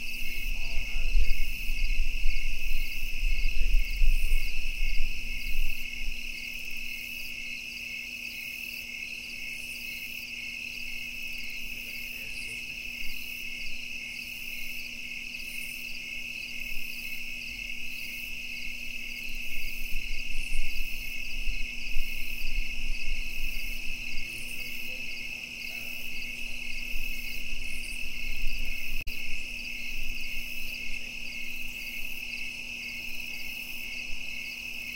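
At 29.01 s there's a short burst of damaged data in the compressed stream, lasting until about 29.08 s, so roughly 70 ms. A stretch of the encoded bytes got lost or overwritten, and the decoder couldn't make sense of those frames. It threw out garbage until it found its footing again at the next valid frame header. You hear it as a brief glitch cutting across the sound.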